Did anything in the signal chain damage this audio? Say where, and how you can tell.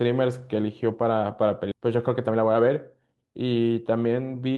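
Yes. Skip ahead in the network or jitter buffer, 1.71–1.73 s: roughly a second of speech vanishes, and the two sides join almost directly with no filler, as a stretch was dropped while later audio was already waiting.

Jitter buffer speed-up from 1.80 to 3.71 s: speech runs at 112% speed with unchanged pitch, as the receiver trims pitch periods, about 200 ms in total, to drain excess delay.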